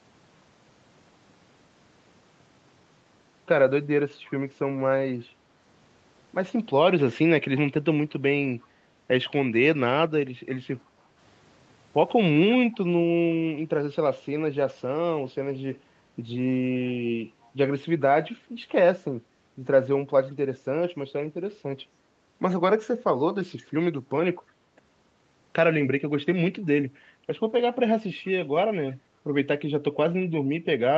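Speech recording with faint echo leak: a delayed copy, about 346 ms behind, at 8.61, 12.53–12.77, 16.86–17.51, 20.3, 24.5 and 28.9 s, likely a loudspeaker echo canceller letting residue through. Around 10.84–11.1 s there's background gated by the echo canceller, with the room sound ducking by about 7 dB for roughly a fifth of a second before coming back.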